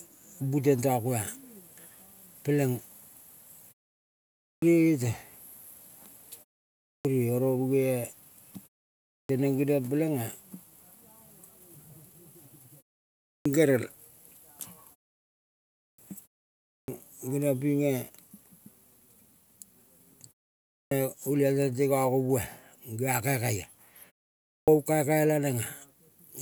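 Speech in which phrases resume with their onsets missing, a clipped start after a pause at 4.34, 6.78, 8.99, 13.17, 15.69, 16.59, 20.64 and 24.38 s. Each follows a gap of 0.35 to 0.82 s, and roughly 0.27 to 0.30 s is swallowed while the output device wakes from sleep. On a waveform the envelope jumps abruptly from flat silence, and a spectrogram shows energy switching on without its first sounds.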